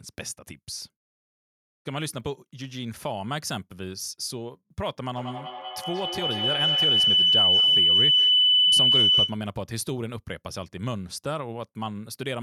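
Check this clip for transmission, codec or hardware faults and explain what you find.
One fault is present: feedback howl, from 5.13 to 9.45 s. A loudspeaker-to-microphone loop in one room gained level on each pass, so the speech narrows into a tone around 3 kHz that repeats roughly every 200 ms and peaks about 10 dB above the speech.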